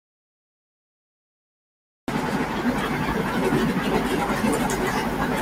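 From the first instant to 2.08 s the audio dropout to silence leaves plain silence, no room tone, likely a lost input while recording continued.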